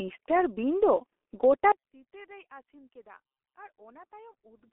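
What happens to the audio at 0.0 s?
At 0.0 s the speech is already passing through the G.723.1 codec, and it stays that way to the end. The sound is squeezed into a telephone band of 300 Hz to 3.4 kHz, with nothing above 3.8 kHz. The codec models the voice in 30 ms frames at a very low rate, consistent with about 6.3 kbit/s. The damage is heavy. Speech sounds muffled and hoarse, and consonants smear together.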